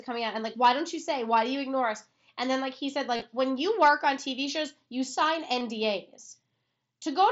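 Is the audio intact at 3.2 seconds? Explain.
No. From 3.16 to 3.22 s there is concealed Bluetooth headset packet loss: about 45 ms of audio is missing across 60 ms, the longest gap 30 ms. The receiver patches each gap by repeating the closest-matching recent waveform, producing a brief buzzy, held tone and a slight warble on recovery.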